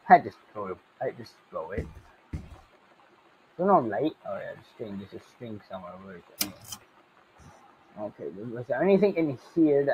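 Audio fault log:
throughout: noise suppressor applied to music or sounds. A speech-tuned suppressor is misreading steady, sustained content as noise, so its gain swings by around 20 dB, causing pumping and thinning.
0.0–1.0 s, 1.31–1.53 s, 2.02–3.58 s, 4.61–4.8 s, 5.15–5.7 s, 6.21–6.38 s, 6.78–7.97 s, 9.38–9.56 s: sound cut by the noise suppressor. Passages are pulled down by about 7 to 10 dB, so they sink and lose their tails.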